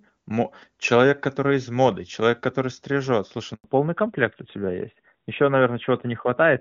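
At 3.54 s the speech cuts off in a handover gap: the call is passed from one network to another, and for 100 ms, until 3.64 s, no speech frames arrive. The sound falls away within a few tens of milliseconds and leaves a clean hole of silence before audio resumes on the new link. Whatever was said inside those 100 ms is gone rather than smeared or repeated.

From 3.64 s to the end, the call shows a fallback to narrowband. Before the switch, the wideband HD Voice path carries detail up to 7 kHz with no more than faint coding damage, which fits AMR-WB at its top 23.85 kbit/s rate. After the switch, nothing above 4 kHz remains, because the new codec only covers the old telephone band. The speech turns duller, boxier and rougher, consistent with AMR-NB at 12.2 kbit/s.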